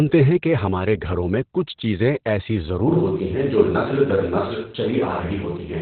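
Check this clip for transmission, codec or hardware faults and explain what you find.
Two faults are present: heavy Opus voice compression throughout, and a likely switch to a distant microphone partway through.

Opus voice compression runs for the whole clip. At 8 kbps the encoder uses its SILK speech mode in narrowband, so nothing above about 4.3 kHz survives and the excitation is coarsely quantised in 20 ms frames. The speech sounds muffled, hoarse and slightly robotic.

From 2.88 s to the end, the pickup has likely switched to a distant microphone after the close microphone's signal was lost or dropped. The speech becomes roomy and hollow with thinner bass, while its level stays roughly the same. Faint background noise sits well below it.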